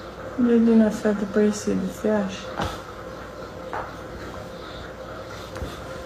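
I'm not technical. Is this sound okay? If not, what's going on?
No. At about 4.51 s there is a repeated buffer. The playback device didn't receive the next piece of sound in time, so it played the last tiny piece once more, about 1.5 ms long, which fits a 64-sample buffer. A repeat that short is heard as a single click, not a stutter. Unlike a dropout, where the sound briefly goes silent, the gap here is filled with a copy of what just played.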